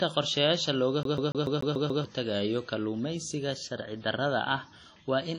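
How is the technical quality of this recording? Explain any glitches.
The quality is held back by two problems: a dull, band-limited sound across the whole clip and a burst of skipping early on.

The first fault runs the full length of the speech. There's simply nothing above about 10.1 kHz, and the band that remains has that smeared, slightly swirly texture of a heavily squeezed codec. The top end has a flat ceiling, and the artefacts sound like a low-bitrate encode rather than like the high-rate MP3 the file now is. This is likely low-bitrate audio saved at a high bitrate, with something like a 32 kbit/s WMA encode later re-saved as a roomy 256 kbit/s MP3. The second encode just preserves the damage. It can't bring back the detail the first one threw away.

The second fault starts at 1.03 s and runs to 2.04 s, where the audio behaves like a CD stuck on one turn. A 144 ms slice of sound plays seven times in a row, with a tiny mute at each jump back. 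The effect is a fast, mechanical stutter at roughly seven repeats per second. That pattern fits a scratch kicking the laser back one track at the same point on each revolution, so the same fragment keeps coming round until playback breaks free just after 2 s.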